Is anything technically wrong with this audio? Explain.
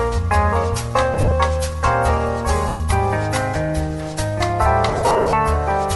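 Yes. There are lost LE Audio frames in three places. From 1.14 to 1.32 s, about 80 ms drops out in short gaps of roughly 20 ms. From 2.68 to 2.80 s, one 120 ms stretch is gone. From 4.89 to 5.33 s, about 270 ms goes missing, with runs up to about 50 ms. The LC3 decoder fills each gap by repeating the last spectrum with random signs. Tones smear into noise. The longer gaps fade toward silence.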